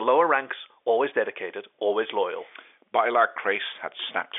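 No technical faults can be heard in this speech.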